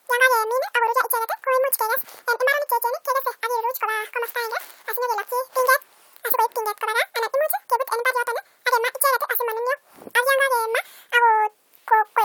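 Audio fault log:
throughout, audio read two samples at a time (double speed): each pair of samples is taken as one frame, so the speech runs at 2x speed and an octave higher. Unlike a pitch shift, tempo and pitch rise together.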